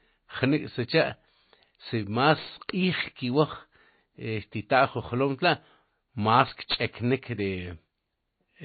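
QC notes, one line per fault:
Throughout, MP3 compression, likely: the speech has nothing above 4.5 kHz, cut off sharply as an encoder starved of bits would do, and the damage is plainly audible. With too few bits, weak frequency components are dropped and flicker on and off between frames, giving a watery, swirly texture, metallic chirps on s sounds and smeared consonant attacks. That degree of loss points to a very low bitrate, around 24 kbps.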